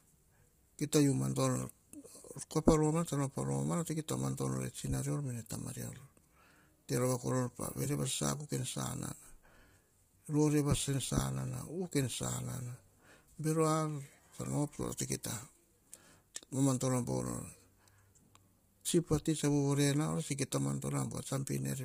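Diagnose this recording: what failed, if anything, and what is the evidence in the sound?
The codec stage failed, most likely through low-delay AAC compression, AAC-ELD. Throughout the speech the voice is rough and grainy, with noise filling the gaps between harmonics and nothing above 15.6 kHz. Its short frames resolve pitch poorly, and the heavy damage fits a bitrate around 24 kbps.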